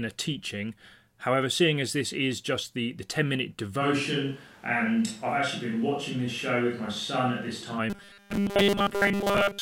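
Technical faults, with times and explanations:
3.83–7.77 s, switch to a distant microphone: the sound turns hollow and roomy, with thinner bass and a room-noise floor about 30 dB below the speech but no real level drop, likely from losing the close microphone. The spectrogram shows weaker lows and reverberant smearing between syllables.
7.90–9.62 s, robotic sound from repeated short buffers: a rigid metallic buzz at 200 Hz, fitting a 5 ms chunk replayed over and over, likely because fresh audio arrived too seldom and most of it was skipped. The spectrogram shows even horizontal stripes every 200 Hz, and the waveform shows identical repeating cycles.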